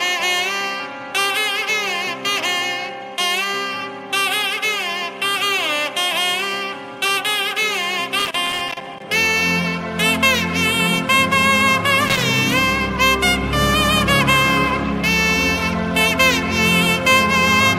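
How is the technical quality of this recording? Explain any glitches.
Two glitches stand out, both loose connector crackle: an irregular burst of scratchy crackle from 8.19 to 9.02 s, about 0.8 s long, and a shorter one from 12.08 to 12.27 s, about 0.2 s. A worn or dirty contact somewhere in the chain is making and breaking as it shifts, so the signal gets chopped on and off in rapid, uneven bursts, and any DC on the line turns those breaks into little pops.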